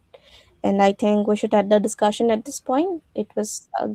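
No technical faults can be heard anywhere in the speech. The Opus voice compression leaves only a light coding texture, with the upper band still present, which fits hybrid mode at around 20 kbps.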